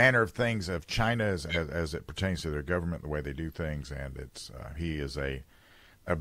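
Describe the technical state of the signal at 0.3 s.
At 0.3 s the speech signal is intact, with no audible technical fault at that moment.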